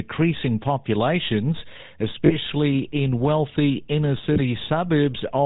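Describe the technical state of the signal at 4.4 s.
Right around 4.4 s the speech has just come out of a brief rough, metallic ring lasting from 4.32 to 4.39 s. For those 40 ms the sound hangs in place instead of moving on. This is the signature of lost GSM frames. The decoder had no good data, so it reused the parameters of the last frame it received and repeated them. The 40 ms span fits two missing 20 ms frames. The gap was too short for the sound to be cut to silence.

Underneath this, and continuing through 4.4 s, is the buzzy, gravelly texture of the GSM full-rate codec, which is plainly audible. It matches the 13 kbps full-rate scheme. Nothing above 4 kHz gets through. The codec also rebuilds the voice from a vocal-tract model driven by a sparse, regularly spaced pulse excitation that keeps only every third sample, and this produces the grainy roughness.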